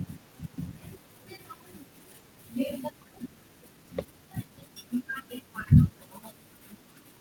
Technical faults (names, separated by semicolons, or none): jitter buffer speed-up